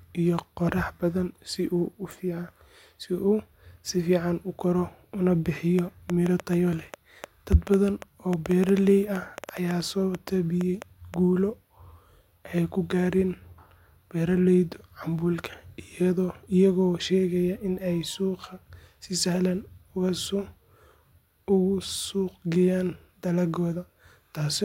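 From 5.79 to 11.15 s, just after "fiican u koro una", a train of clicks ticks irregularly at about 4.9 per second, roughly 10 dB above the speech, likely from interference.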